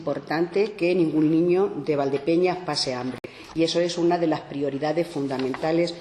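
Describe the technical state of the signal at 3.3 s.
Right around there you've got what sounds like a Bluetooth stall, running from about 3.18 to 3.26 s. The audio drops to dead silence for roughly 58 ms and then carries on. The likely cause is radio interference holding up packets long enough for the headphones' buffer to empty, so playback simply halts until the resent data arrives. By 3.3 s the signal has just recovered from that gap.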